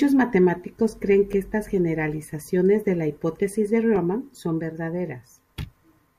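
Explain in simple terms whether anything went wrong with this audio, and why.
Two tiny stutters, at 1.33 s and 3.96 s, are each a repeated buffer: fresh audio arrived late, so a 10 ms slice of the speech played twice, heard as a click.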